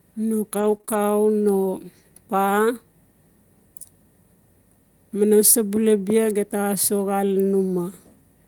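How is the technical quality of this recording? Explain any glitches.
The recording has one glitch, repeated packet loss (robotic sound), from 0.57 to 0.95 s. Audio went missing in a few short gaps, the longest about 20 ms, each patched by extending the preceding sound. About 15% of that stretch is filled in this way, giving choppy speech with pieces missing.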